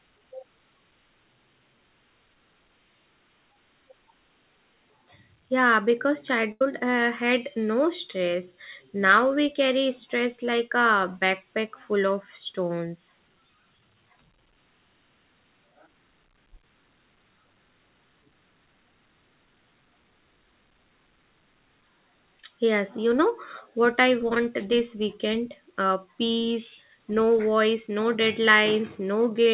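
Speech over a WebRTC call path whose G.711 A-law coding, consistent with a 64 kbps stream, leaves nothing above 4 kHz. A burst of packet loss hits at 6.52 to 6.62 s, just before "uh had no stress": the receiver extends the last sound for about 85 ms, fading it into a held buzz or hiss, then resumes with roughly 90 ms of audio skipped. Short concealed packet loss appears twice, at 9.08 s between "uh had no stress" and "we carry stress like", and at 24.35 s between "you know what I" and "this weekend". Each time about 10 ms went missing and was patched by continuing the preceding sound, heard as a brief smear or wobble.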